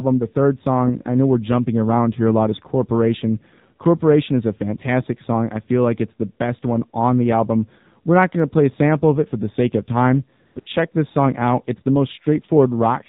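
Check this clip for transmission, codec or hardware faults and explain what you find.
Two faults are audible: narrowband mobile coding across the whole recording, and brief comfort-noise gaps just after 10 s.

AMR narrowband mobile codec, throughout: the speech was passed through AMR-NB, which samples at 8 kHz and rebuilds the voice from a vocal-tract model driven by a few pulses per subframe. The damage is plainly audible and fits one of the lower modes, around 7.4 kbps. Nothing above 4 kHz survives, so the speech sounds muffled and boxy, with a buzzy, synthetic edge to the voice.

AMR comfort noise, at 10.46 to 10.56 s, 10.60 to 10.66 s and 10.92 to 10.94 s: the sending side judged the talker silent and stopped transmitting speech frames for 100 ms, 60 ms and 20 ms. The receiver filled each gap with synthetic noise built from a rough level and spectrum description. The real signal drops out and is replaced by smooth, steady hiss that switches in and out abruptly.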